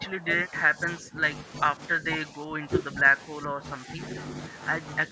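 Speech that repeatedly dips by roughly 10 dB from 0 to 1.22 s, 2.01 to 3.05 s and 3.39 to 3.99 s, with a slight dip at 5.08 to 5.11 s, is likely speech suppressed in double talk: the echo canceller could not separate this talker from the overlapping far-end echo and attenuated this talker too.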